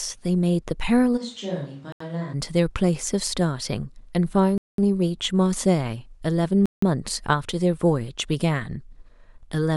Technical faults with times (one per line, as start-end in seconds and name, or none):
1.19-2.32 switch to a distant microphone
1.92-2.00 Bluetooth stall
4.58-4.78 Bluetooth stall
6.66-6.82 Bluetooth stall